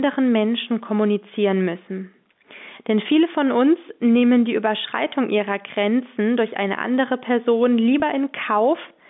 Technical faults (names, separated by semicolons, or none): gain pumping; packet loss with pitch repetition